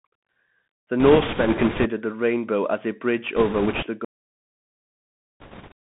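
The whole clip has gone through a Bluetooth CVSD headset codec, and the damage is plainly audible. The speech sits in a narrow telephone-style band, roughly 150 Hz up to 3.4 kHz, with nothing bright above it. That band fits a 64 kbps CVSD link. The encoder sends only one up-or-down bit per sample with an adapting step, so it can't keep pace with fast, loud high content. That's why the s sounds come out scratchy and there's a grainy hiss riding under everything.

From 1.00 to 1.89 s, just before "the rainbow as a", you get bit errors on a Bluetooth voice link. The speech picks up a rushing, crackly noise, at an error rate of around 5 percent. There are no sharp clicks, though. Each flipped bit only nudges the waveform one small step, and the codec recovers from it quickly, so the errors smear into noise rather than popping.

It happens again from 3.36 to 3.86 s, right after "rainbow as a bridge". 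The error rate there is a bit lower, around 4 percent, so the crackle is slightly gentler.

At 4.05 s the clip has a cut-off end. The sound stops dead mid-utterance and drops straight to digital silence with no natural decay. The final stretch of audio simply never got written out.

There's one more burst of bit-error crackle from 5.40 to 5.72 s, again at around 5 percent.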